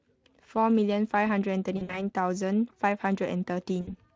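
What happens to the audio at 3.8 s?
From 3.81 to 3.93 s, VoIP packet loss concealed by the speech codec: about 60 ms of packets, which fits three lost Speex frames, is filled by extrapolating the last pitch and filter at falling gain, giving a stretched, buzzy or noise-like fading tail. A spectrogram shows a frozen, smeared spectrum dimming, and the waveform shows a decaying envelope.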